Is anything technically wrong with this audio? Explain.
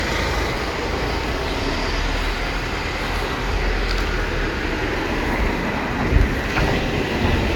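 Yes. Throughout the clip the sound is swirly and hollow, with smeared, softened attacks and nothing above 17 kHz. This is generation loss, likely from the audio being decoded and re-encoded about three times with a lossy codec; the character fits AAC-LC at around 96 kbit/s. Each pass quantises again on a shifted frame grid, so noise and spectral gaps build on one another, and the result sounds worse than a single encode at that bitrate would.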